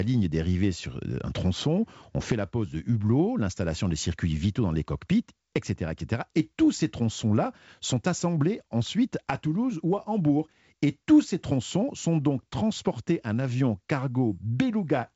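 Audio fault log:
No faults detected.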